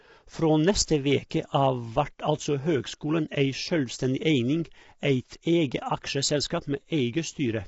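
From start to finish the speech sounds rough and grainy, with nothing above 7.8 kHz, likely low-delay AAC compression squeezing short frames at something like 24 kbps.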